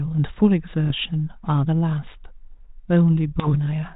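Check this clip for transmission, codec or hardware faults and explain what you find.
Two bursts of bit errors on an ADPCM link damage the speech, carried over what sounds like 32 kbit/s G.726 with light coding roughness and nothing above 4 kHz.

Bit errors on an ADPCM link, 0.84 to 0.93 s and 3.40 to 3.52 s: a small fraction of a percent of bits flipped, each corrupting the decoder's step size and prediction so the damage rings on, heard as pops, gritty bursts and brief level jumps.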